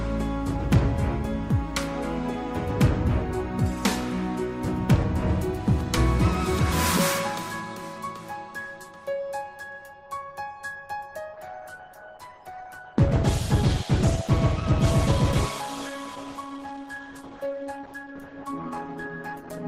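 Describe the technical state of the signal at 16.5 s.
At 16.5 s you're in the middle of an adaptive stream at a lower bitrate, which runs from 11.33 s to the end. There's no gap, just a sudden step down where codec artefacts thicken. It sounds like the stream fell back to something around 16 kbit/s.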